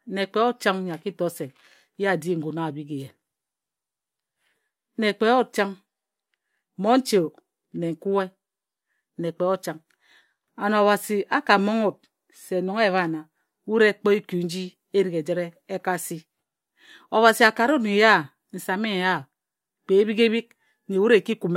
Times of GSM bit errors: none

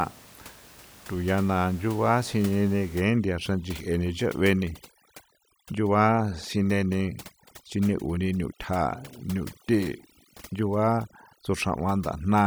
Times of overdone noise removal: 3.00-12.47

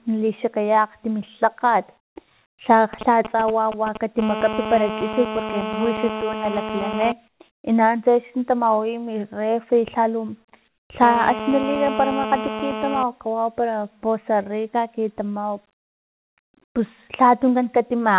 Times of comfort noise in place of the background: 7.28-7.40, 10.68-10.90

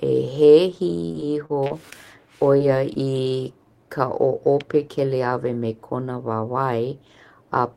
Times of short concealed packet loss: 2.58-2.62, 2.94-2.97

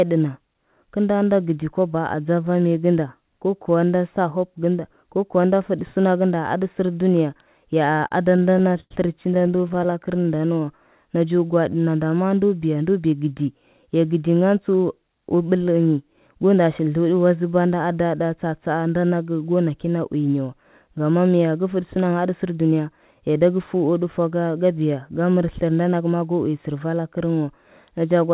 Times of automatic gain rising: none

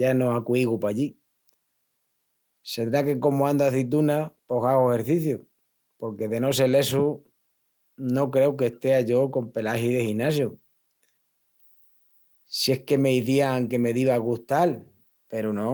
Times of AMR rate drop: none

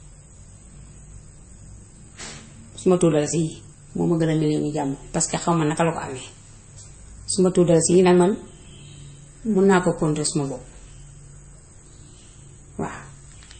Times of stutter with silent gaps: none

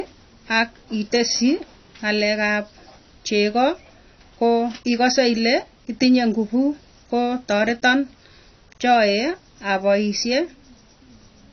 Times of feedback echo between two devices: none

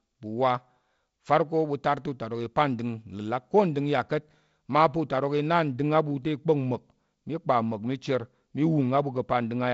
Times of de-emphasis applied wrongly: 5.68-9.73

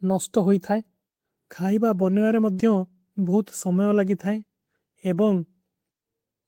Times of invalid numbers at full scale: none

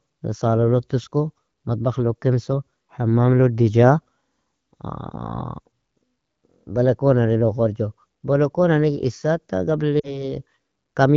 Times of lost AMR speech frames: 10.00-10.30

